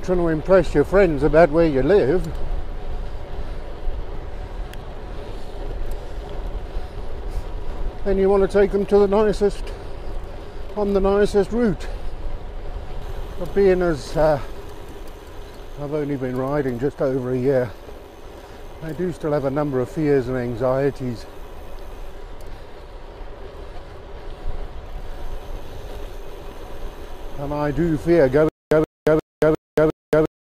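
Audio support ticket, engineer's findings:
Stutter with silent gaps, 28.49 s to end: 127 ms burst repeats every 354 ms, digital silence between. Likely stream stall replaying last fragment, unlike a plain dropout.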